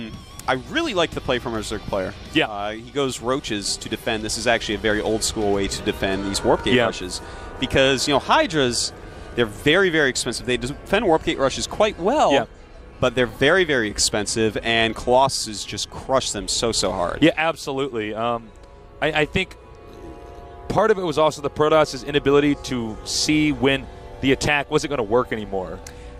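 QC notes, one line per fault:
13.29 s and 20.78 s, dropped buffer (overrun): At each of these two points the sound jumps very slightly forward with no gap of silence. Only a tiny slice goes missing, about 1.5 milliseconds. The likely cause is that the capture program fell behind and the hardware overwrote a small buffer before it was read. The two sides of the hole then join directly, leaving a sudden step in the waveform.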